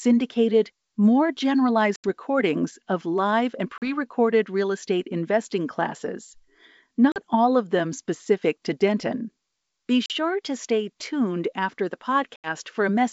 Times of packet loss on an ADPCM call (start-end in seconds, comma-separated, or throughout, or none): 1.96-2.06, 3.78-3.89, 7.12-7.17, 10.06-10.11, 12.36-12.49